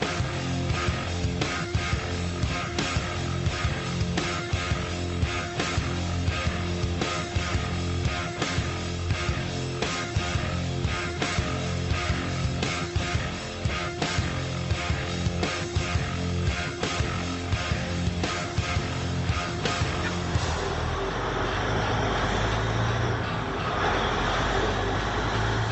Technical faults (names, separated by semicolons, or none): none